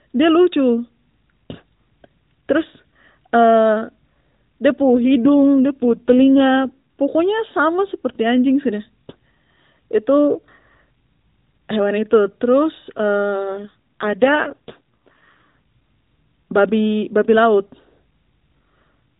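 Speech over a narrowband mobile link shows an AMR rate drop from 4.80 to 6.80 s and again from 13.48 to 15.51 s. The voice turns buzzier and more synthetic, which fits the codec stepping down from 12.2 to 5.9 kbps on a weak radio link. A spectrogram keeps the same 4 kHz ceiling with no gap, but the harmonics look smeared.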